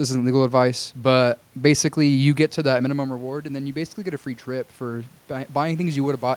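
From 2.82 s, just after "you get to that", an automatic gain rising fault: the level fell by about 12 dB when the talker moved back around 2.5 s, and the gain control climbs slowly to the end, swelling voice and room noise together.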